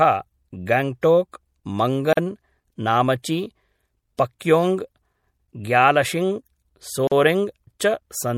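A speech recording, likely damaged by MP3 compression at a rate consistent with around 64 kbps, leaves watery, swirling artefacts plainly audible throughout. Three separately encoded pieces were joined without trimming their padding, opening gaps of silence, each about 43 ms long, at 2.13–2.17 s and 7.07–7.12 s, with smeared edges before the sound resumes.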